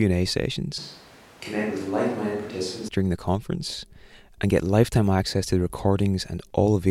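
From 0.78 to 2.88 s the close microphone likely drops out, a switch to a distant microphone: speech turns hollow and roomy, thinner in the bass, about 5 dB quieter, with room noise roughly 20 dB below it, starting just before "during the conference and".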